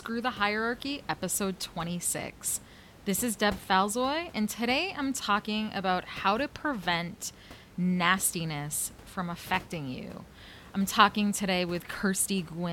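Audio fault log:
No faults logged; the room's background noise sits about 21 dB under the speech and belongs to the recording itself.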